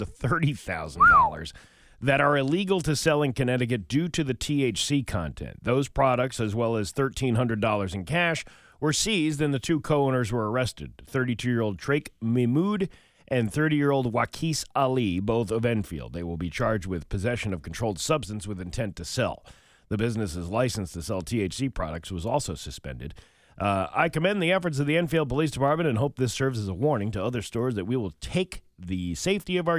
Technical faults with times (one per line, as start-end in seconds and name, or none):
none